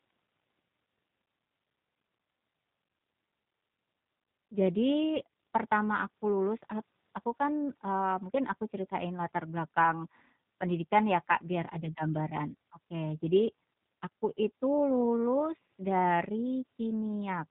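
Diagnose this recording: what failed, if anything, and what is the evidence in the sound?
Across the whole clip the speech is band-limited, with nothing above 4 kHz, and sounds plainly rough and synthetic, with a buzzy, rebuilt quality. This is codec damage from G.729 coding, which fits an 8 kbit/s VoIP link: each 10 ms frame is resynthesised from a vocal tract filter, pitch predictor and a few pulses.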